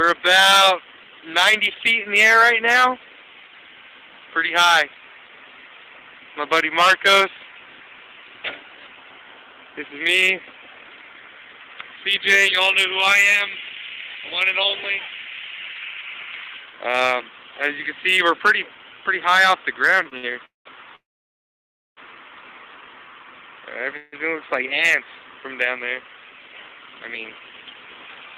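Right around 20.03 s you get a quick run of short stalls from late packets: 20.03 to 20.07 s, 20.09 to 20.13 s, and 20.17 to 20.25 s. Each time a packet missed its slot, the jitter buffer ran dry, and the receiver stretched the last bit of sound (18, 22 and then 56 ms) until the packet showed up. Nothing's actually lost. You just hear a sound hang on a touch too long, with a buzz or dip.

Right after that come the call audio freezes, at 20.45 to 20.67 s, 20.95 to 21.99 s, and 23.97 to 24.14 s. Each time, the last sound carries on as a buzz or hiss. In the first it dies away to 160 ms of silence, and in the second, roughly a second long, to 960 ms of silence. The third, 156 ms, never goes silent. Each time, the audio then picks up exactly where it left off, so a gap gets inserted rather than anything dropped. The likely cause is packets held up in transit, emptying the jitter buffer.

Then from 26.03 to 26.89 s there's a jitter buffer speed-up. 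By then all those delays had left the buffer holding more audio than it wants. To claw that back, the receiver snipped out tiny pitch-period-sized chunks over and over, around 150 ms in total. That plays at 114% speed with the pitch unchanged, and it comes across noticeably hurried.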